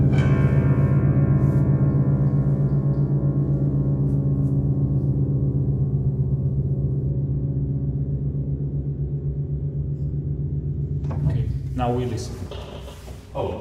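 From 7.11 s to 11.11 s, the stream switches to a lower bitrate, likely because the connection slowed. Quality changes suddenly, with no gap. Codec artefacts rise, and nothing remains above 11.7 kHz. The sound fits a drop to a low-rate HE-AAC version.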